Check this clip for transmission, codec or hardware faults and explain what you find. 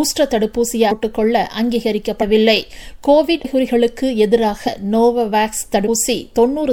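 Five sudden jumps forward, each with a brief smeared blip, come from compressed frames skipped. Whole 26.1 ms codec frames went unplayed: at 0.90, 2.21, 3.44, 4.67 and 5.87 s, dropping roughly 300, 70, 200, 100 and 150 ms of audio.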